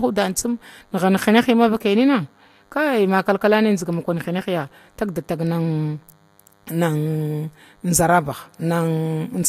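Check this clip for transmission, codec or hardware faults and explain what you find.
One hardware fault runs through the whole speech clip: DECT cordless phone buzz. A nearby DECT unit's 100 Hz radio bursts get rectified, leaving a thin, harmonic-rich buzz roughly 40 dB below the speech.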